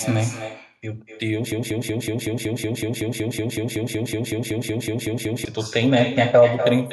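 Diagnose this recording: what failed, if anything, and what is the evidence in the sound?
The call path ran with no echo canceller, so the far end's loudspeaker fed back into its microphone and returned across the network. This echo with no canceller shadows the talker's speech throughout, arriving about a fifth of a second late and about 10 dB quieter, sounding thinner.

A broken-record loop runs from 1.52 s to 5.45 s: the same 187 ms fragment repeats back to back about 21 times. The likely cause is a stalled stream or player resending its last held buffer, and the speech belonging to that span is lost.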